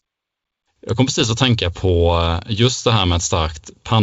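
From 1.20 to 1.31 s come pops and a rough, gritty burst with brief level jumps: bit errors on an ADPCM link. Each flipped bit upsets the decoder's step size and predictor, so the damage rings on for milliseconds rather than leaving a silent gap like packet loss.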